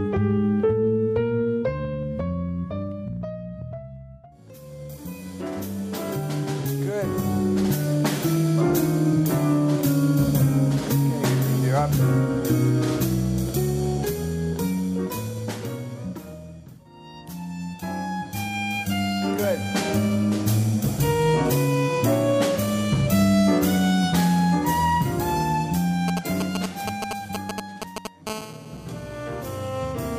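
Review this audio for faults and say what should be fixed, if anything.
GSM signalling bursts from 26.08 to 28.07 s: a galloping pattern of ticks and short 217 Hz buzzes, nearly as loud as the audio itself, from a nearby phone's radio pulses rectified by the circuitry.

GSM phone buzz from 28.27 to 29.93 s: a steady, raspy 217 Hz buzz rich in harmonics, about 16 dB below the audio, as the phone transmits in bursts 217 times a second during a call.

To prevent both, keep mobile phones well away from microphones, cables and preamps during recording, and use shielded, balanced cabling with RF filtering at the inputs.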